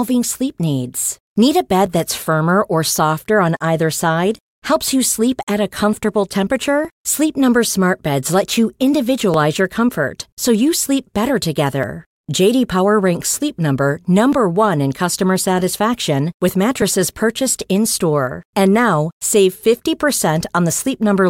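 At 1.86 s the speech skips forward by a few milliseconds, with the two sides butted together and no gap of silence. The same tiny jump returns at 9.34 s and again at 14.33 s. These are audio missing between chunks. The spacing between them lands on multiples of 2.5 s. That grid points to the likely cause: audio handled in 2.5 s chunks, with a sliver dropped at some handovers.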